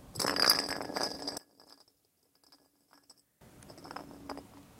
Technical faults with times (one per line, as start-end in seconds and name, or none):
1.38-3.41 one channel inverted